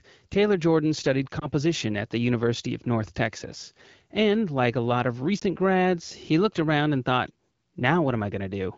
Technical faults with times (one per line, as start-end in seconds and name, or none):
1.40-1.49 lost AMR speech frames
5.39-5.44 lost AMR speech frames